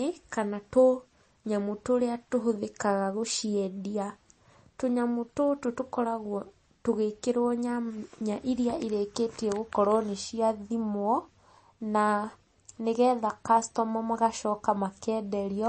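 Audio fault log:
Throughout: MP3 compression, likely. Nothing reaches above 8.3 kHz, so the speech sounds dull and muffled. The damage is plainly audible. Starved of bits, the encoder dropped the treble and discarded weak detail, which fits a low bitrate around 32 kbps.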